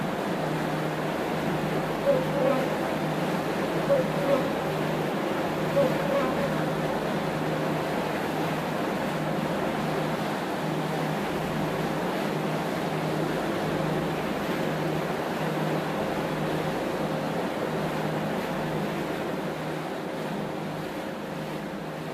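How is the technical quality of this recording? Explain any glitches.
No technical glitches can be heard in this recording.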